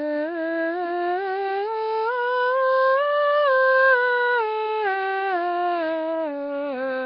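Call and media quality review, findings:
Nellymoser compression, throughout. Music is rough and hissy, with a smeared, underwater quality. Nothing above 5.4 kHz. Likely Nellymoser Asao coding at a low bitrate, around 22 kbps. Too few bits for weak bands, which are replaced with noise. Heavy damage.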